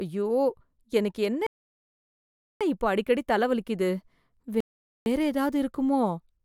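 The speech drops into dead silence at 1.47 s and sits there until 2.61 s, then picks up again with "இப்ப அடிக்கடி தலை வலிக்குது", right where it left off. That's a rebuffering stall: the player ran dry and had to wait for more data. The same thing happens again from 4.60 to 5.06 s. Nothing gets skipped, but those two gaps add about 1.1 s and 0.46 s of time to the clip.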